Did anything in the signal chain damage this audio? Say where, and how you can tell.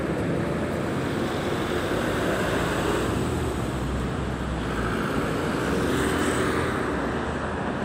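No, nothing in the signal chain damaged this audio.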